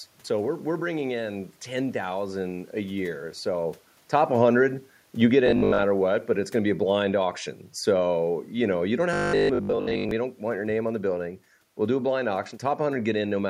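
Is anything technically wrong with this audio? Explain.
Yes, there are two faults.

Automatic gain falling runs from 4.12 to 7.32 s. The gain control judged the input too loud or its background noise too strong and pulled its gain down by about 4 dB over those three seconds, so the voice and the room noise behind it sink together.

Robotic sound from repeated short buffers occurs at 5.46 to 5.84 s and 9.13 to 10.11 s. The voice becomes a rigid metallic buzz at 50 Hz. This is likely caused by audio arriving too seldom, with roughly 20 ms chunks replayed in place of most of the real signal.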